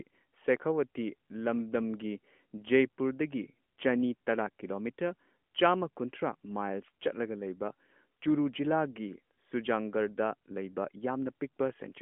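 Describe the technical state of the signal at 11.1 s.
At 11.1 s the signal is intact, with no fault present at that moment.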